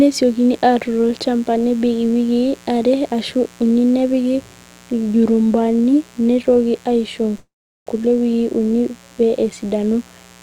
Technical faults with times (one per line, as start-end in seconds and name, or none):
0.00-10.42 mains buzz
7.37-7.88 call audio freeze